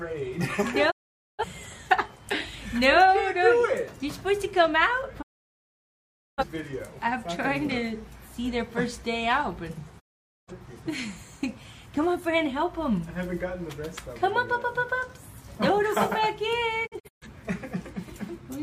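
The sound fades out over about 20 ms and goes silent from 0.90 to 1.45 s, 5.21 to 6.44 s, and 9.99 to 10.52 s, then breaks into several short holes between 16.86 and 17.27 s. This is digital broadcast dropout: the receiver muted on bad frames, and that programme is lost.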